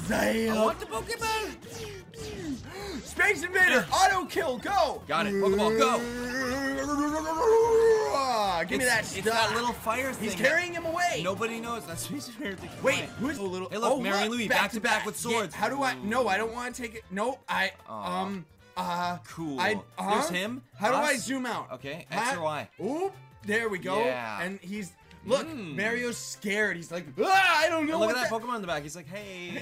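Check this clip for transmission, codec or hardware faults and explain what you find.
There are two problems, both in the middle of the clip.

First, a skip ahead at 13.37 s. About 0.7 s of audio is simply gone, and playback jumps straight from one side of the gap to the other with nothing filling it. That's a chunk dropped in transit or by the buffer while later audio was already queued up, which cut the delay by roughly the same amount. You hear an abrupt splice where the sound leaps forward mid-flow.

Then there are two stretches of jitter buffer speed-up, from 13.51 to 14.31 s at about 109% speed, and from 15.49 to 17.44 s at about 107%. The buffer was still holding more audio than it wants, so it kept snipping out tiny pitch-period-sized slices. That took out around 70 ms and 150 ms respectively. Pitch stays put, but the sound runs noticeably quicker and a bit rushed in those windows.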